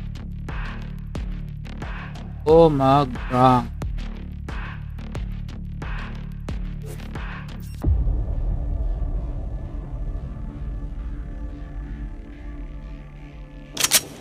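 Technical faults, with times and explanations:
No technical faults detected.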